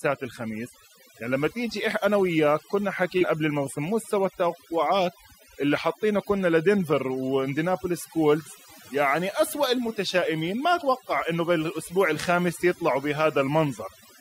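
Overdone noise removal runs throughout: an over-aggressive noise reduction stage cuts frequency bands near its noise estimate, leaving twinkling near-silence between phrases.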